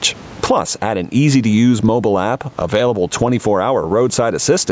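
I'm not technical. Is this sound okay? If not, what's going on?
No. Gain pumping runs through the whole clip: loud and soft parts end up closer in level and the sound is squashed, likely from over-high microphone gain and a fast limiter.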